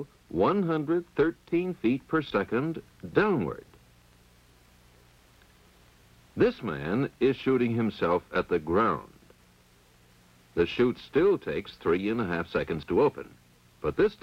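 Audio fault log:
throughout: low bit depth without dither, gritty grain tracking the signal about 40 dB down, likely 9-bit rounding; stepped waveform, signal-shaped hash on spectrogram.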